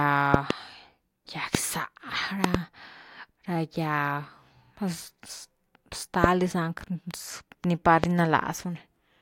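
A loud pop lands on the speech five times. A double pop comes at 0.34 to 0.53 s, then a single one at 1.55 to 1.57 s. Another double follows at 2.44 to 2.57 s, then singles at 6.24 to 6.26 s and 8.04 to 8.06 s. The first four are sharp thumps about 25 dB above the speech, and the last is about 20 dB. The speech carries on underneath. The likely cause is a sudden electrical pulse from a plug, switch, static or driver glitch.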